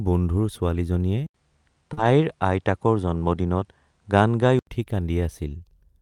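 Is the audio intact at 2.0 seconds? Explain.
No. At 2.0 s three faults overlap. From 1.26 s to 4.67 s the sound is band-limited, with nothing above 10.5 kHz. It has a different tonal colour, a new noise floor roughly 50 dB below the signal, and little change in level. An 80 ms silence marks the change at 1.26 s. This pattern of an input switched to a poorer device likely comes from the system moving to another microphone or a headset call profile. That device's narrower passband and own character dull the sound for the whole span.

Inside that span there is a short concealed packet loss from 1.93 s to 1.99 s. About 40 ms of audio never reached the decoder in time, and the receiver synthesised roughly 37 ms to cover it. It extrapolated the preceding sound, following its pitch where voiced and using shaped noise where not, then crossfaded back to real audio. The result is a brief smear or wobble just before 2.0 s, and a short transient there can drop out.

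Overlapping it, from 1.97 s to 2.03 s, is a lost packet rebuilt from error correction. About 40 ms was restored from low-bitrate redundant copies carried in the following packets, which points to two separate lost packets under Opus in-band FEC. There is no gap, but these frames sound coarser and noisier than their surroundings because the copies were encoded at much lower quality.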